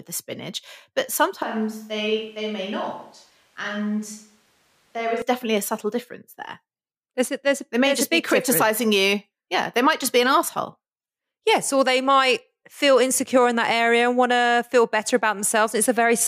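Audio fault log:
1.42–5.22 s, switch to a distant microphone: The speech abruptly turns roomy and hollow, with thinner bass. Level falls about 5 dB. Background noise rises to roughly 35 dB below the speech. The close microphone was likely dropped for a farther one. The return is equally sudden.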